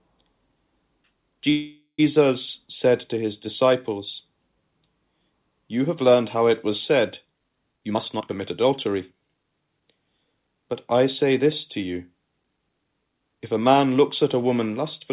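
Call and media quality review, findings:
Call audio freeze, 1.50 to 2.00 s. Likely delayed packets draining the jitter buffer; receiver extends last sound as fading buzz or hiss, final 100 ms silent. Audio resumes where it stopped: nothing lost, about 484 ms of delay added.

Jitter buffer speed-up, 7.73 to 9.52 s. Buffer over target; receiver trims pitch-period pieces repeatedly, about half a second in total. Sound runs at 127% speed, pitch unchanged, hurried. Band-limited to 4 kHz by the G.711 call path throughout.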